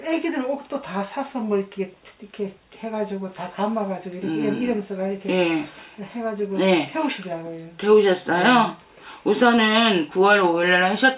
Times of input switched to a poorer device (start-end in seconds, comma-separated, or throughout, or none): none